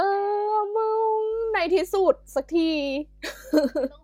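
From about 1.3 s to the end, mains hum creeps in under the speech. It's a steady 50 Hz drone with a few low harmonics, sitting roughly 30 dB below the voice. That's the power line leaking into the signal, probably through a ground loop or a nearby transformer.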